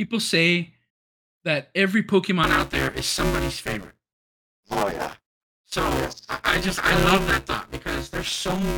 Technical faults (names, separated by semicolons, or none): buffer tearing